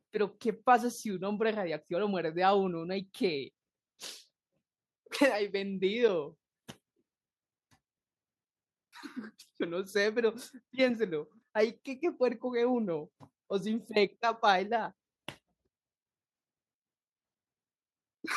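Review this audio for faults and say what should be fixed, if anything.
Nothing here needs fixing; there are no faults in the recording to chase down.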